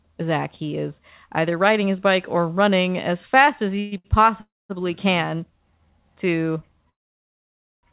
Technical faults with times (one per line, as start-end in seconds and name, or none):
3.76-4.06 short stall from a late packet
3.79-3.94 call audio freeze
4.40-4.71 call audio freeze
6.89-7.85 call audio freeze